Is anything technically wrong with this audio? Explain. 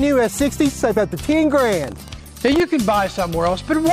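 Yes. From 1.8 to 2.62 s there is buffer tearing. The writing side of the playback ring buffer and the hardware reading it have drifted out of step and cross inside each period. A small sliver of every buffer, a couple of percent, is left holding audio from roughly 70 ms earlier, with hard joins at both edges. Those joins repeat at 25 Hz and are heard as a robotic buzz or rattle at that rate, present only while there is signal.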